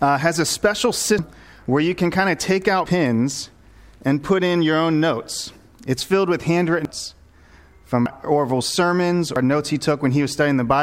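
Joins at 1.19, 6.85, 8.06 and 9.36 s mark forward jumps of about 0.4, 0.3, 0.2 and 0.1 s. These are compressed frames skipped: whole frames of roughly 93 ms went unplayed.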